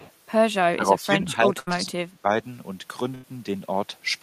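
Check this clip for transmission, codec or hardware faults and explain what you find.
Three kinds of fault are audible: a brief echo leak at the very start, a stretch where the talker is turned down during double talk, and two bursts of packet loss.

Echo leak, 0.00 to 0.12 s. At the far end a loudspeaker's output is likely reaching its microphone, and the echo canceller is not removing all of it, so a copy of the voice comes back about 0.32 s late. Here that copy is faint, about 25 dB below the speech, and lasts only a fraction of a second at the opening, heard as a trailing ghost behind the voice.

Speech suppressed in double talk, 0.71 to 2.29 s. The echo canceller, likely unable to tell the local talker from loudspeaker echo while both sides spoke at once, pulls the level down across roughly one and a half seconds. At its deepest the voice sinks by around 20 dB, so it dips, dulls and partly drops out in pieces rather than staying steady.

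Burst of packet loss, 1.59 to 1.69 s and 3.15 to 3.25 s. In each case a run of audio arrived too late or not at all, and the receiver stretched out the last sound it had, 73 ms of fill in the first and 86 ms in the second, fading it as the gap went on. The voice turns into a brief held buzz or fading hiss, then resumes with about 80 ms of speech skipped.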